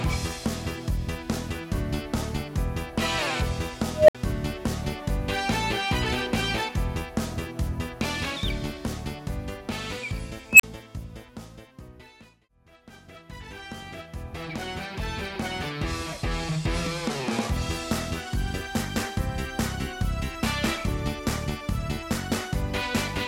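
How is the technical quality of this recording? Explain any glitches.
The recording has two unstable filter faults. At 3.93 to 4.15 s, a tone near 700 Hz swells over 158 ms, clips, then drops to 63 ms of silence. At 10.52 to 10.63 s, a squeal near 3 kHz builds in 80 ms, followed by 37 ms of silence. A recursive filter's feedback ran away, overflowed, and cut out until it reset.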